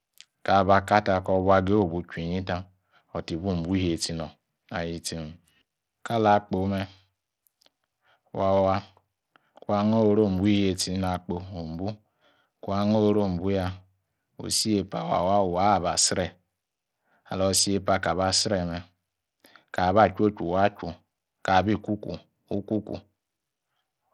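A speech clip with one fault running from start to finish. The treble is thin and unstable. High frequencies drop out and flicker. A gritty, grainy noise and aliasing sit on top of the speech. This damage is plainly audible throughout. It is likely Bluetooth SBC compression. At a low bit budget, SBC starves the upper sub-bands of bits and coarsely quantises the rest. The result sounds like a rate near 80 kbps.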